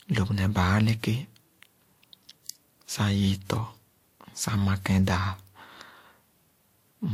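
Transcoding between lossy codecs, throughout: nothing above 16.6 kHz, with two layers of artefacts heard together, pointing to a low-rate Vorbis encode likely re-encoded as WMA.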